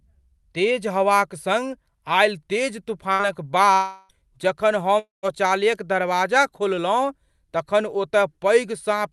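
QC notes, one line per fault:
3.13–3.22 s, burst of packet loss. Right after "आयल तेज" the last sound is held for about 58 ms and fades. The speech then picks up again a little further on, with about 60 ms gone. A short run of packets never arrived in time. The receiver stretched the last sound to cover the hole and then jumped ahead.
3.73–4.12 s and 4.99–5.26 s, long network dropout. Both gaps are likely dropouts in the network feed. In the first, the last sound is carried on and fades for about 358 ms, never reaching full silence. About 360 ms of speech is missing. In the second, the fill fades out, the last 150 ms or so are silent, and about 240 ms is lost. Speech then resumes further along.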